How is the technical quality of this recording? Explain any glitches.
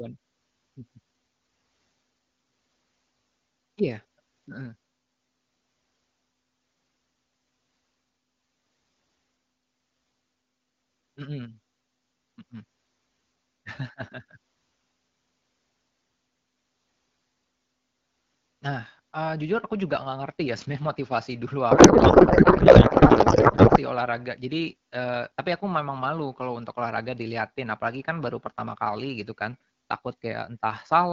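The speech comes through AMR wideband (HD Voice) coding. It shows light coding artefacts, consistent with a rate around 12.65 kbit/s. There is one clear glitch.

From 21.71 to 23.78 s there is a codec payload misread. The sender packed AMR frames octet-aligned, but the receiver read them as bandwidth-efficient. The decoder found every field in the wrong place. For about two seconds the speech becomes garbled noise and warble that barely follows it.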